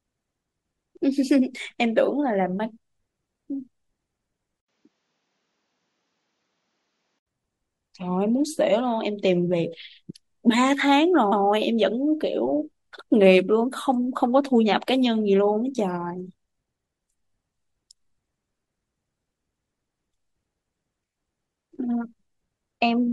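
From 4.60 to 7.27 s the speech turns duller, with nothing above 7.6 kHz and a faint new noise floor after an 80 ms gap, likely an input switched to a poorer device; unlike a filter, the tone and background change too. At 11.31 s a 116 ms stretch plays twice, a stutter from repeated frames that lengthens the clip rather than dropping sound.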